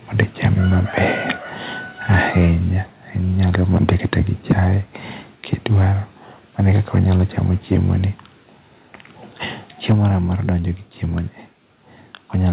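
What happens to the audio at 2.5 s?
Right there you're at the tail end of a burst of microphone overload running from 2.1 to 2.53 s. The input was likely driven about 7 dB too hot, so the waveform tops get sheared flat on around a tenth of the samples, giving the loudest syllables a harsh, crackly edge.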